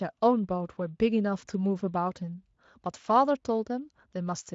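No technical faults can be heard anywhere in the speech, and the Speex coding leaves no audible damage.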